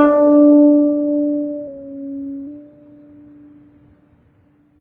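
At 4.74 to 4.79 s, right at the end, damaged data in a compressed stream produces a brief glitch lasting about 50 ms. Corrupted bytes made the decoder misread those frames, lose sync and hunt for the next valid frame header.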